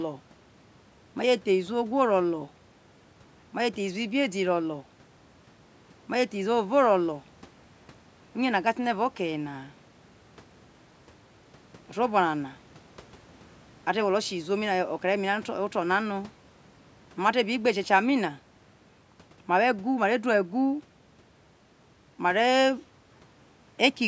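No faults are audible in the speech; the only processing heard is the normal call-microphone chain, which trims the lowest bass and leaves nothing above 8 kHz.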